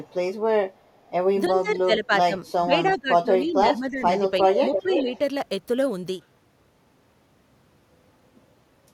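Echo leak at 0.06 to 0.13 s and again at 0.73 to 1.1 s: a faint delayed copy of the speech trails it by 330 ms, sitting roughly 40 dB below the talker. The likely cause is a far end playing the call over a loudspeaker whose echo canceller let part of the microphone pickup slip through and sent it back.

Speech suppressed in double talk from 1.48 to 2.34 s and from 2.57 to 4.14 s: the talker's level sinks while the other side is also speaking, by roughly 15 dB in the first stretch and about 10 dB in the second, the affected parts adding up to under a second and about a second. A brief dip of around 5 dB follows at 4.41 to 4.48 s. This is likely an echo canceller unable to tell the talker from its loudspeaker echo, so it turned both down.

Echo leak at 4.49 to 5.18 s returns far stronger, the 330 ms delayed copy now only about 5 dB under the speech. Inside it, from 4.83 to 5.09 s, the speech is suppressed in double talk again, dropping around 10 dB for roughly 200 ms.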